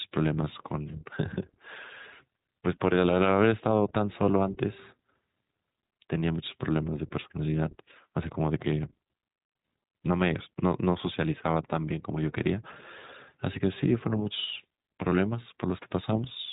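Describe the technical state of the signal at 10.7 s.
At 10.7 s the speech carries iLBC codec damage, present throughout the clip. Each 20 ms frame's excitation is coded independently, giving a plainly audible rough, synthetic texture, which fits the 15.2 kbps mode, and nothing passes above 3.8 kHz.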